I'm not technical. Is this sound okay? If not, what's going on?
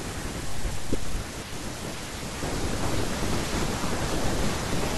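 Yes, this one's fine: I listened all the way and there's nothing wrong to point out.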